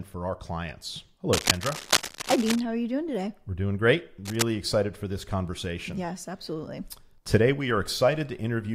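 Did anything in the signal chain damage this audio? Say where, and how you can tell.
Yes, analogue wiring: cable scratch noise at 1.33–2.60 s and 4.25–4.44 s, likely fluctuating connector contact resistance, appearing as ragged broadband spectrogram streaks about as loud as speech in the first burst and about 5 dB below it in the second.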